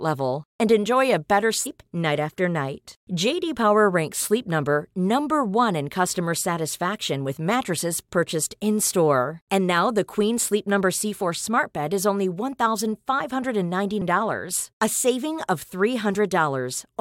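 Speech with two brief disturbances, a chirp, squawk, click or short hole, from 1.63 to 1.67 s and again at 14.0 s, where damaged data in the compressed stream made the decoder misread frames and resync.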